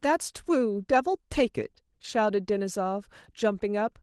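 No technical faults can be heard in this speech.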